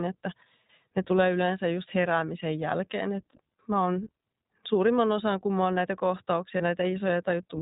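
From the very start the whole speech clip carries the iLBC codec sound. Everything above 4 kHz is gone, so it has that narrow telephone quality, and the damage is plainly audible: a slightly rough, synthetic edge, since each short block of excitation gets coded on its own. The block rhythm fits 20 ms frames, and the overall quality points to the 15.2 kbps mode.

Then around 6.58 to 6.62 s there's a brief patch of lost iLBC frames, roughly 20 ms of missing audio, about one frame's worth. The decoder covers the hole by repeating the last pitch cycle with some noise mixed in, so you hear a tiny held, faintly buzzy vowel instead of a clean gap. Because iLBC frames don't depend on each other, the voice snaps back right after.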